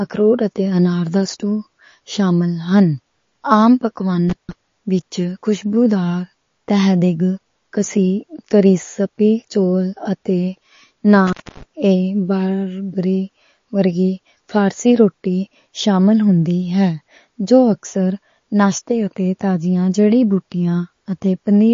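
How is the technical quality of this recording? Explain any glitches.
The quality is poor. Plainly audible codec damage runs through the speech, and two brief dropouts break it.

MP3 compression, likely, affects the whole clip. Nothing survives above 7.2 kHz. Weak frequency lines switch on and off, giving a watery, swirly sound. This points to about 32 kbps.

Intermittent contact occurs at 4.30 to 4.52 s and 11.27 to 11.63 s. A loose connection opens for about 0.16 s, then about 0.25 s. The speech drops out, with crackle at the edges.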